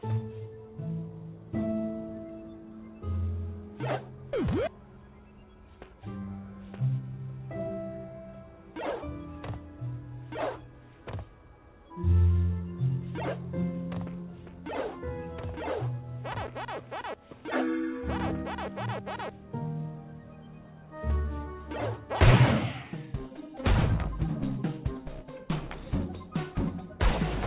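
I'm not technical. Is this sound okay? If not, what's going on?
Yes, no faults here; it's ordinary phone-call audio, which is why nothing above 4 kHz comes through.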